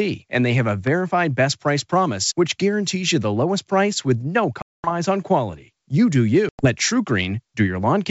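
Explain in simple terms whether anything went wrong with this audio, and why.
Packet loss on an ADPCM call: about twenty packets vanished at 4.62 s and about ten at 6.49 s. The decoder lost track, so the speech cuts to silence, then returns briefly clicky or distorted.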